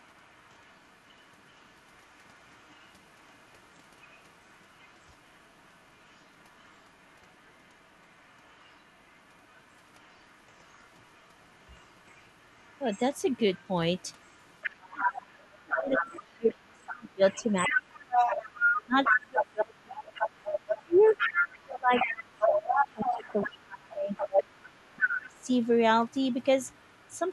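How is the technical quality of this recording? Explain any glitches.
The recording has clear echo problems: a second voice runs under the speech for almost the whole clip, and in the second half the main talker is repeatedly pushed down while that other voice is present.

From 0.0 to 25.67 s, and again faintly from 26.1 to 27.33 s, the other side's voice leaks through. A second talker is audible beneath the main speech, about 10 dB quieter for most of the clip and about 40 dB quieter at the end. This is likely the far end playing from a loudspeaker and reaching the microphone because the echo canceller left residue. Unlike room reverberation, it is a separate voice, not a smear of the talker's own speech.

From 14.93 to 20.28 s, 20.84 to 24.61 s and briefly 25.19 to 25.48 s, speech is suppressed in double talk. The main voice drops by as much as about 30 dB, about 25 dB in the last short event, and loses its brightness or breaks into pieces. 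This adds up to roughly four seconds, then three, then a fraction of a second. The likely cause is the echo canceller being unable to separate the talker from the overlapping loudspeaker voice and so attenuating both. What separates this from network dropouts is that the dips follow the overlap with the other voice.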